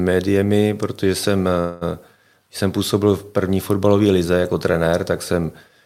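Packets were likely held up and the jitter buffer ran dry at 1.59 s, a call audio freeze: a fading buzz fills about 0.22 s before speech resumes intact.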